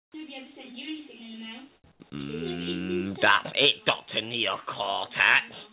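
Comfort noise in place of the background fills the opening 0.14 s. The quiet bed, which sits about 39 dB below the loudest passages, turns into a flat, textureless hiss about 17 dB quieter than the real background. This is most likely discontinuous transmission: with nothing detected, the sender went silent, and the receiver filled the gap with generated noise that only roughly matches the room's spectrum.

An onset clipped by the voice detector follows at 0.12 to 0.14 s. The sound begins hard, with its soft lead-in missing for about 20 ms and the synthetic hiss sitting where that rise should be. The likely cause is a detector that was slow to register the sound starting again, so those first moments were never transmitted.

Comfort noise in place of the background returns twice more, from 1.76 to 1.84 s and from 1.92 to 2.00 s, each lasting 80 ms. In each gap the natural background drops away and a smooth, featureless noise stands in, about 9 dB and about 10 dB below the real background respectively. 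Throughout the clip, the band stops at 4 kHz, which fits a narrowband G.711-type call codec.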